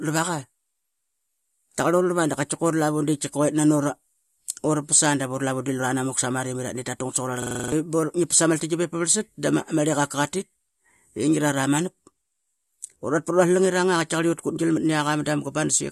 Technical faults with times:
7.42-7.72 system hang loop

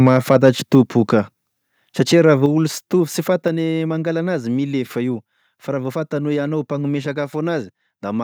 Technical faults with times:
0.06-0.75 microphone overload
0.75 microphone volume stepped down
2.46 microphone volume stepped down

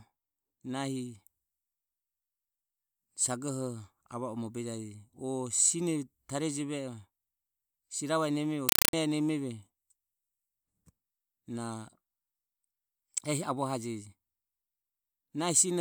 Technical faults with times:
8.69-8.93 compressed stream played as audio

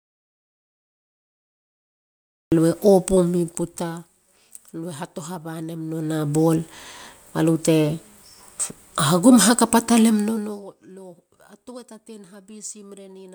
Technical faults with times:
0.00-2.52 audio dropout to silence

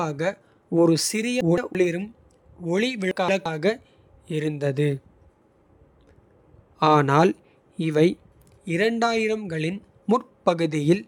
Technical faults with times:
1.41-1.75 frames out of order
3.11-3.46 frames out of order

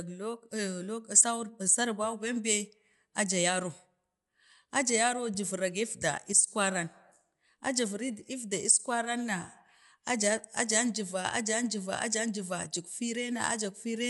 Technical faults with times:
0.00-14.10 Dolby Digital compression

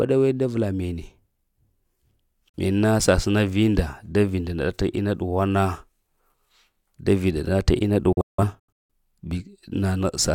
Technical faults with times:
2.49-2.58 digital broadcast dropout
8.12-8.91 digital broadcast dropout

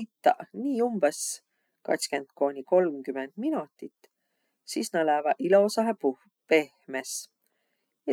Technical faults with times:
none

